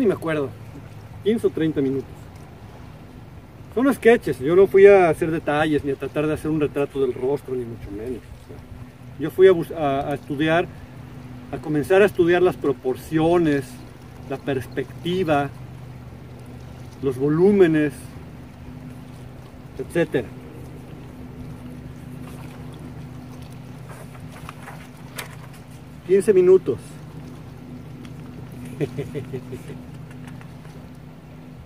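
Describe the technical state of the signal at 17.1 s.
At 17.1 s the signal is intact, with no audible fault at that point.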